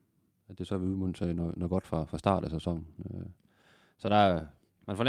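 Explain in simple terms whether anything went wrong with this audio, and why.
Something did go wrong: there is clock drift between sender and receiver. The sending device's audio clock runs about 2% slower than the receiving one's, so sound arrives a little too slowly and the receiver's buffer keeps running low, leaving small timing hiccups across the clip.

To keep up, the receiver makes repeated timing corrections from 0.06 s to 4.73 s, repeating short slivers of audio at uneven intervals. Together these add roughly a tenth of a second, so the pace is slightly slowed, at about 98% speed.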